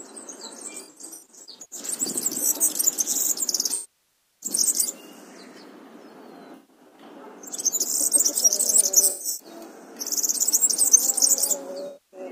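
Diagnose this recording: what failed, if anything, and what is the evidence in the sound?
Codec stage: AAC frame loss with concealment. Smeared patches at 0.77, 6.55, 9.10 and 11.87 s, and at 3.74 s a longer loss that decays to a faint noise floor and fades back in. The decoder rebuilt missing frames from earlier spectrum.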